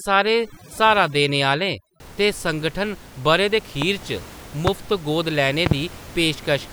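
From 0.0 to 2.0 s the speech shows overdone noise removal. The reduction is set so aggressively that individual frequency bands near the noise estimate are pulled down or gated out, taking quieter speech detail with them. The background drops away into twinkling specks.

Loud pops follow: a single pop at 3.82–3.85 s roughly 15 dB above the signal, another at 4.67–4.70 s near 20 dB, and a close pair at 5.66–5.74 s, also around 20 dB. Each is a sharp transient over continuing speech, likely from a voltage step such as a switch, plug or static discharge. The room noise sits about 20 dB below the speech.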